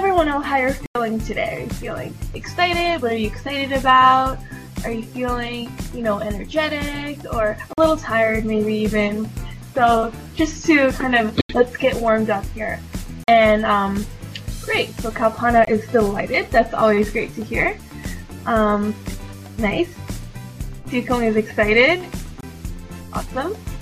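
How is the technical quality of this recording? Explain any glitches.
The recording has six dropouts, each a block of digital silence: 0.86–0.95 s, 7.73–7.78 s, 11.41–11.49 s, 13.24–13.28 s, 15.65–15.67 s and 22.41–22.43 s. The output buffer likely wasn't filled in time, so whole blocks went out as zeros. Most of the lengths (about 23, 46 and 93 ms) fit power-of-two chunks at 44.1 kHz; the 82 ms gap at 11.41 s does not. With no fade, the sound cuts out and back abruptly. Every gap is longer than about 15 ms, so each is heard as a brief hole.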